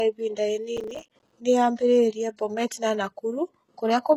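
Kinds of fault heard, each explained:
HE-AAC compression: treble above 12.3 kHz is absent, and the upper band sounds rebuilt, gritty and lispy on s sounds, likely from heavy low-bitrate spectral band replication; spectrograms show smeared, copied-looking high bands.
Processor overload crackle: from 0.77 to 1.33 s, repeated missed buffers of roughly 5 ms drop to silence, giving gritty tearing; waveforms show many short hard-edged gaps.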